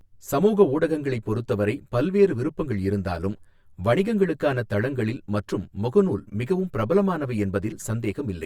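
Throughout the speech there is channel delay (comb filtering): one channel runs around 10 ms late, and the mono sum cancels at fixed notches from about 50 Hz up, roughly 100 Hz apart. It sounds hollow and phasey; unlike flanging, the notches never sweep.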